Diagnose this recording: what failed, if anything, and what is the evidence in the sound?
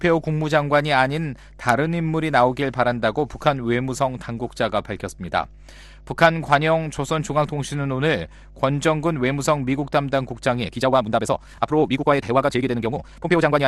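There's mains hum all the way through: a steady 50 Hz tone sitting roughly 25 dB under the signal. That points to the analogue wiring, where a ground loop or a nearby transformer is leaking the power line straight into the signal path.

From 10.58 s to the end at 13.67 s there's a time-stretched section. The pace suddenly jumps to about 1.84 times normal and sounds rushed, but the pitch doesn't move. It was likely squeezed in software to fit a length, with short pieces dropped to hold the pitch steady.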